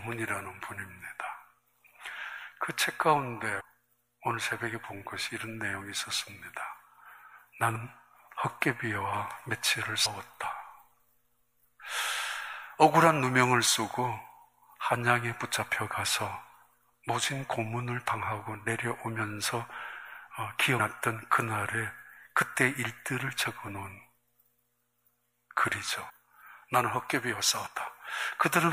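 Compressed frames skipped at 3.59, 7.75, 10.05, 20.78, 26.09 and 27.65 s: whole frames of roughly 26 ms were never decoded. The audio jumps ahead by roughly 300, 100, 100, 150, 150 and 70 ms.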